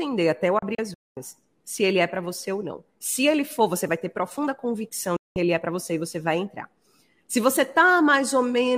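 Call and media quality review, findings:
Digital broadcast dropout, 0.59 to 1.17 s: several short muted holes scattered over about 576 ms, roughly 288 ms lost in total, longest gap 224 ms. Receiver muting on lost-signal or failed-checksum frames, 3 ms fade-out, then the programme resumes.

Digital broadcast dropout, 5.16 to 5.36 s: single muted gap of 192 ms, 3 ms fade. Same receiver-side frame-loss muting. Gap lengths fit whole frames of about 32 ms. Content sent during both gaps is unrecoverable.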